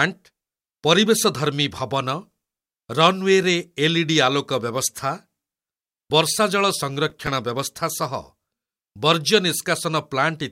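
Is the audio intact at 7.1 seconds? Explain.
No. From 7.10 to 7.27 s there is processor overload crackle: the processor missed about seven deadlines on very short buffers of a few milliseconds, replaying stale audio each time. The hard-edged repeats form a gritty crackle that clears just before "ବ୍ୟବସ୍ଥା ସହ".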